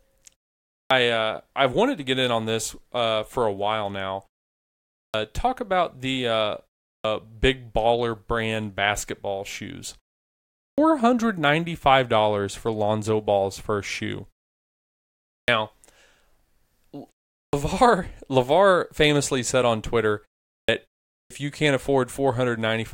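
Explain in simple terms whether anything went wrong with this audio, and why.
Yes, there is a clipped start after a pause: after each silence, the playback device seems to need a moment to wake, so roughly the first 0.12 to 0.14 s of sound vanishes. You hear abrupt starts at 0.78 s (before "uh I've wanted to"), 5.01, 6.91, 10.65, 15.35, 17.41, 20.55 and 21.17 s (before "you can't"). Muted pauses also quiet the gaps, but lose nothing; here the opening sounds are actually missing.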